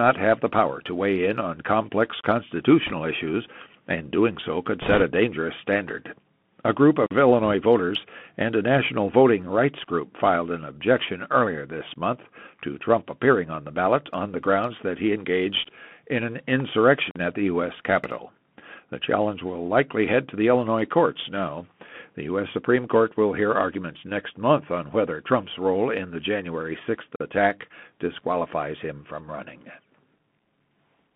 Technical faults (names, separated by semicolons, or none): Bluetooth CVSD headset codec; bit errors on a Bluetooth voice link; gap between chunks